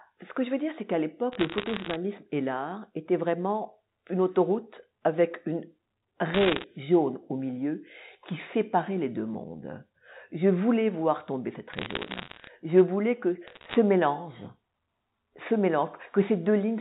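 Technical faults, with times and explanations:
1.32–1.96 s, 6.34–6.64 s (just before "jaune au milieu qui"), 11.72–12.48 s (right after "voulais voir tomber cette") and 13.47–13.75 s (after "voulais que"), bit errors on a digital phone line: short bursts of crackle sit over otherwise unchanged telephone-band speech. Each flipped bit corrupts a single 8-bit sample, and hits on the sign or upper bits jump the waveform sharply, producing ticks. The 6.34 s burst is densest, around one or two bits in a hundred; the others are sparser, roughly one in a hundred or fewer.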